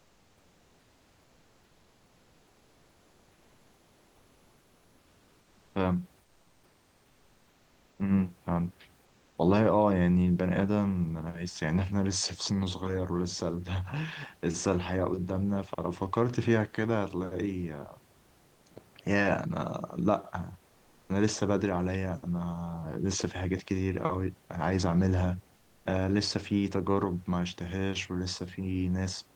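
A speech recording in which the pauses at 0.0–5.75 s, 6.23–7.99 s, 9.05–9.37 s and 25.55–25.85 s carry comfort noise in place of the background: the room noise turns steady and featureless, about 1–3 dB quieter, rather than dropping to silence as under a noise gate. The likely cause is discontinuous transmission.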